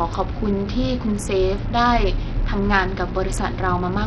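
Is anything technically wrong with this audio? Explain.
Yes, there's heavy Bluetooth SBC compression damage running through the whole speech clip. The treble flickers in and out, with gritty noise and aliasing riding on the voice. That's likely SBC at a starved bitrate, which fits roughly 64 kbps, coarsely quantising its sub-bands and leaving the top ones without bits.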